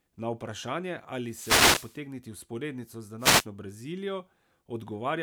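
A burst of hiss and static swishes over the speech from 1.23 to 2.02 s, and a shorter one from 3.18 to 3.46 s. These are wireless microphone noise hits: reflections cancelled the FM radio signal, so receiver noise rose through the fade.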